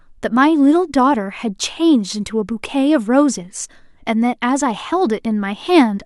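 Nothing in this speech clip stands out as a technical problem; it simply runs along with no glitches to point to.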